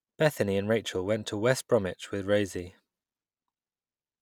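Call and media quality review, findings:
Nothing stood out on listening to the speech in this clip.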